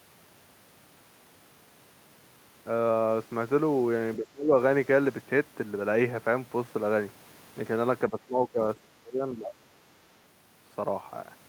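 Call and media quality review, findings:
Speech suppressed in double talk at 4.16–4.53 s (dips about 25 dB, roughly 0.3 s) and 8.1–9.53 s (about 20 dB, near 1 s total). Likely echo canceller in double talk, unable to separate near talker from loudspeaker echo, attenuating both.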